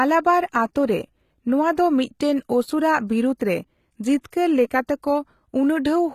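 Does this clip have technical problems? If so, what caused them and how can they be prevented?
Yes. Throughout the speech, sibilants sound gritty and lispy, with synthetic treble ending at 14.9 kHz. This likely comes from HE-AAC compression, rebuilding highs by copying lower bands upward, consistent with roughly 20 kbps. Unlike plain low-bitrate coding, the treble stays bright rather than dull. Prevent it by encoding at a higher bitrate with standard AAC.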